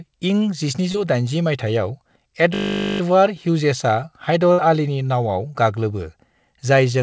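Around 0.92 to 0.96 s there's a short concealed packet loss. About 20 ms of the call didn't reach the decoder in time, so the receiver stretched the last bit of sound over the hole and blended back in. You hear it as a quick smear or wobble.

From 2.54 to 3.00 s a system hang loop kicks in. Something froze while the sound hardware kept replaying the same 20 ms slice of its buffer, 23 times over. Looping that fast gives a steady 50 Hz buzz rather than a stutter, and the audio seems to pick up where it left off afterwards.

At 4.52 to 4.60 s, just before "आलीनि नावआव", there's a burst of packet loss. Roughly 60 ms went missing in one go, and the receiver held the last sound while fading it down. It comes across as a short held buzz or fading hiss, and the speech then jumps ahead with that chunk gone. Throughout, the G.722 call path at 64 kbps leaves nothing above 8 kHz.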